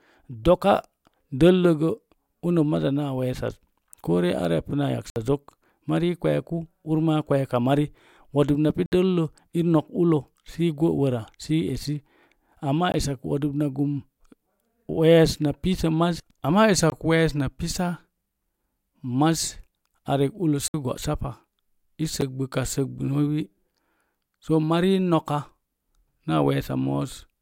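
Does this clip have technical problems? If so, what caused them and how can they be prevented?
Yes. Blocks of digital silence replaced the speech six times: 60 ms at 5.1, 8.86 and 20.68 s, 20 ms at 12.92 and 16.9 s, and 9 ms at 22.21 s. This points to the output buffer not being filled in time. Each abrupt cut to silence and back has no fade, so the 9 ms one sounds like a tick and the 60 ms ones like brief holes. Larger buffers and a higher-priority audio thread would prevent these dropouts.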